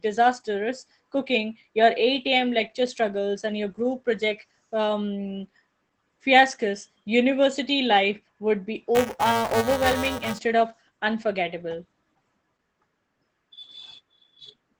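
Across the whole recording the speech carries Opus voice compression at 12 kbps in SILK mode. The linear-prediction coder keeps only a wideband signal, so nothing above 8 kHz survives, and the coarsely coded excitation makes the voice muffled, hoarse and faintly robotic. Unlike a simple low-pass filter, the damage also roughens the texture of the voice itself, and it stays constant rather than coming and going.

From 8.95 to 10.39 s, after "university life would be" and before "of unforgettable", buffer tearing adds a steady buzzing rattle at about 345 Hz, which fits a 128-sample buffer. The writing and reading sides of the buffer have slipped and cross in every period, so a small slice of each buffer replays audio a few milliseconds old, with hard joins on both sides. Unlike dropouts or clicks, the buzz is periodic and present only while speech is sounding.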